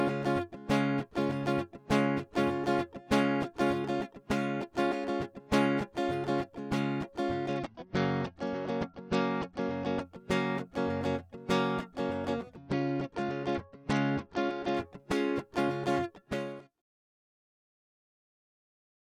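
Bluetooth SBC bit pool drops at 7.48 to 10.01 s and again at 12.57 to 14.76 s: the music dulls and turns gritty as the link starves the encoder. This fits a fall from bit pool 28 to 10, near 84 kbps, leaving the top sub-bands with few or no bits and the rest coarsely quantised.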